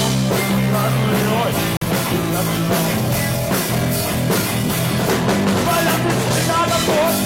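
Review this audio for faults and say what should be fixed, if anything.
A corrupt frame muted leaves a hole of silence from 1.77 to 1.85 s, about 86 ms, which points to a single rejected compressed frame replaced by silence. Unlike a buffer dropout, the gap starts abruptly and the timing around it stays intact, with nothing shifted or repeated. Adding error protection or checksums to the transport, with retransmission of damaged frames, would prevent it.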